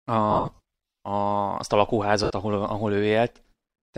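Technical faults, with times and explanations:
0.31–0.59 s, lost LE Audio frames: about 240 ms of sound goes missing in short gaps spread over 435 ms, the longest around 50 ms. The LC3 decoder fills each gap by repeating the last spectrum with scrambled phase, so the speech turns into a hissy smear. On a spectrogram, the harmonic lines break into flat, noisy blocks. The waveform stays filled in but loses its periodic shape.
2.24–2.30 s, lost LE Audio frames: 60 ms of sound goes missing between "azt a" and "ahol ahol". It gets the same randomised-spectrum fill, so it sounds like a brief noisy blur. On the spectrogram it shows as a short smeared band.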